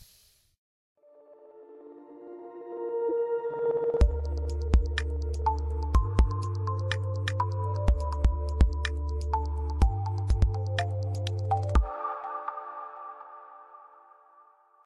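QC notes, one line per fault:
3.09–3.12 s, corrupt frame decoded: for about 30 ms, roughly a single frame's worth, the sound gives way to a short burst of misplaced energy peaking around -20 dBFS, heard as a chirp, squeak, blip or noise burst. Flipped bits in one compressed frame led the decoder to apply wrong gains or misread coded values, so it rebuilt energy at frequencies that do not belong there. Playback continued through the damaged frame, and the error lasts only as long as that frame.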